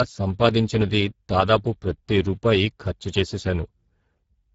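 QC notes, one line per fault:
throughout: Speex codec damage, plainly audible across the whole speech clip. The CELP coder is starved of bits for the excitation signal, so the voiced sound comes out noisy and hoarse. The degree of roughness fits a bitrate near 10 kbps. The spectrum stops at about 7.7 kHz, consistent with Speex running in its wideband mode.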